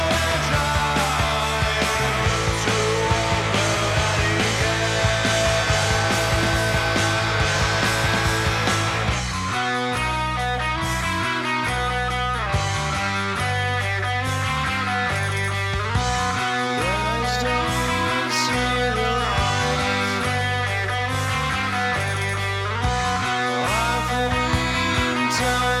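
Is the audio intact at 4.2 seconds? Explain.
Yes, the audio is intact at 4.2 seconds, with no dropout, click, distortion or other fault at that point.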